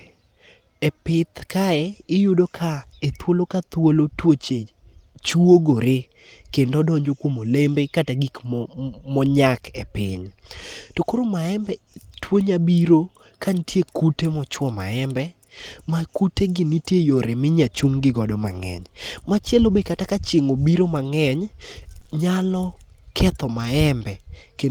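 At 5.27 to 5.37 s, a lost packet was rebuilt from error correction: several separate packets, which fits three of them, failed to arrive, but the packets that followed carried low-bitrate copies, and the decoder played those instead. Nothing drops out. That stretch of speech turns briefly rougher and grainier, with a thin, noisy texture.

At 21.99 to 22.03 s and again straight after at 22.03 to 22.07 s comes short concealed packet loss, two back-to-back 20 ms holes where the audio arrived too late to decode. The receiver filled each one by extending the preceding sound and then blended into the real signal. The result is a single brief smear or wobble about 40 ms long, where a short sound can be swallowed.

At 23.57 to 23.67 s another lost packet was rebuilt from error correction, again fitting about three packets. The same coarse, noisy patch is heard with no gap.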